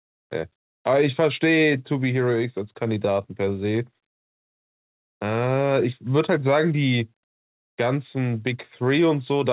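No faults are audible in the speech; the band stops at about 4 kHz, consistent with a narrowband call path through a G.711 mu-law codec.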